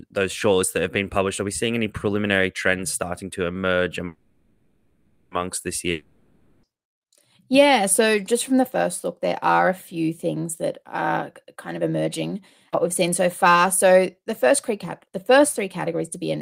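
Speech interrupted by four kinds of network fault. From 4.05 to 5.33 s a call audio freeze holds the last sound as a fading buzz for about 1.26 s. The packets were likely delayed until the jitter buffer ran empty. The speech then resumes where it stopped, with nothing lost but about 1.26 s of added delay. On a spectrogram the harmonics smear into flat horizontal bands that dim over the stretch. From 5.91 to 6.65 s a long network dropout gives a similar fading fill lasting 0.72 s. This time the underlying 0.72 s of speech never plays, likely because those packets were lost outright. The waveform shows a decaying tail, and the speech re-enters abruptly with a discontinuity at the join. A jitter buffer speed-up runs from 10.79 to 12.23 s at 112% speed, trimming roughly a fifth of a second to shrink an overfull buffer. A second one, from 13.54 to 16.37 s at 105%, removes about 150 ms. Pitch stays unchanged while the delivery sounds hurried, and syllables look compressed in time on the spectrogram without any shift in harmonic spacing. 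At 12.72 to 12.75 s a skip ahead jumps forward, dropping around 150 ms of speech. The waveform splices the two sides almost directly, leaving a visible seam.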